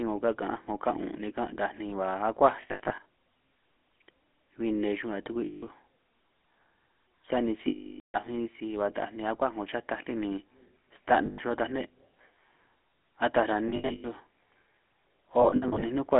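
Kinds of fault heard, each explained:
GSM full-rate codec: The whole clip runs through the original GSM speech coder, which fits its 13 kbps rate. It models the vocal tract and drives it with a sparse, evenly spaced pulse train, so the speech comes out buzzy and gravelly. That roughness is plainly audible throughout. The band is squeezed to about 250 Hz to 3.4 kHz, so the low body and all the air above that are gone.
lost GSM frames: Six times the decoder had bad frames and covered them by repeating the last good frame's settings at a falling level. You hear it as a rough, metallic ring over the speech. The losses come at 2.62 to 3.06 s, 5.46 to 5.63 s, 7.68 to 8.17 s, 11.26 to 11.39 s, 13.68 to 14.21 s and 15.42 to 15.83 s. The one at 7.68 s is a solid 460 ms, so the ring decays toward silence.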